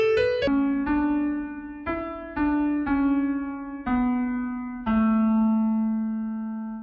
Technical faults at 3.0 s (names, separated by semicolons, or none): wrong sample rate